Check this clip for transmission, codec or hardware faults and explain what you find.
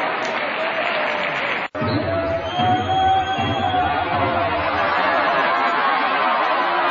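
Two codec faults are audible. The damage runs through the whole clip, with one sharp event early on.

Throughout the clip, the treble is cut off and the top end sounds watery and swirly. Faint high detail flickers in and out, and transients smear. The likely cause is MP3 compression at a very low bitrate, around 32 kbps. Starved of bits, the encoder drops the highest frequencies outright. It also zeroes weak spectral lines, which switch on and off between frames and cause the swirl.

Pre-echo occurs from 1.71 to 1.75 s. A short hiss, about 18 dB above the quiet level, leads into a sharp attack and spreads roughly 33 ms ahead of it. The codec spread its noise across a long block, about 72 ms. Noise sized for the loud onset therefore filled the silence before it. This points to the encoder never switching to short blocks, so the attack also sounds softened.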